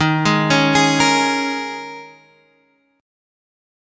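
There are no technical faults to describe in time order, only the normal band limit of call microphone processing, with nothing above 8 kHz.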